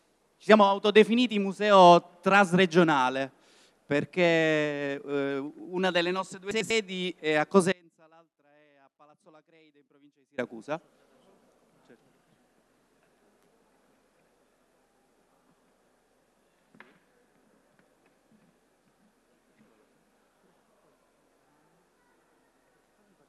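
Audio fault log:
6.51 to 6.70 s, frames out of order: two adjacent runs of four frames, each about 96 ms, were decoded in swapped sequence. The short stretch plays with its halves exchanged, a garbled flutter, and nothing is lost in time.
7.72 to 10.38 s, audio dropout to a faint residue: the wanted signal was lost for about 2.66 s, likely through a break upstream while the later path stayed live. Sound cuts out abruptly, leaving only a faint leak roughly 30 dB down, then returns mid-flow.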